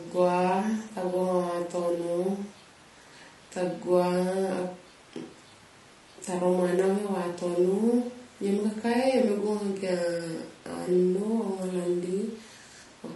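From start to finish the speech sounds rough and grainy, with a hiss sitting between the harmonics and a top band that comes across thin and a bit synthetic. That's the signature of low-delay AAC compression, likely AAC-ELD, the call codec. Its short frames can't separate voice harmonics cleanly, and at a rate that fits roughly 32 kbps there aren't enough bits to cover it, so the damage is plainly audible.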